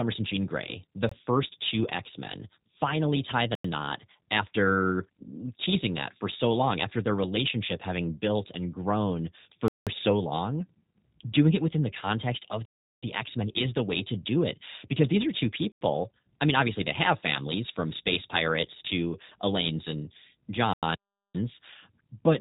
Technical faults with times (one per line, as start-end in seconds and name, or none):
0.00-22.40 G.729 codec
1.09-1.11 block of digital silence
3.55-3.64 block of digital silence
9.68-9.87 block of digital silence
12.65-13.03 block of digital silence
15.72-15.81 block of digital silence
20.73-20.83 block of digital silence
20.95-21.35 playback stall